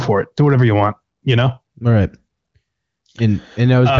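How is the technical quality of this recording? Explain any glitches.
No faults can be heard in this speech recording. It has passed through the AMR wideband (HD Voice) codec, which leaves nothing above about 7.3 kHz, and the speech stays clear, which points to one of the codec's higher rates.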